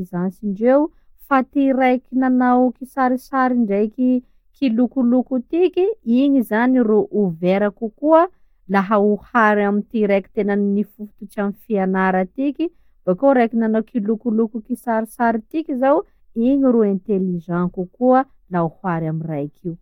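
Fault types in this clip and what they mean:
Nothing stood out on listening to this speech recording.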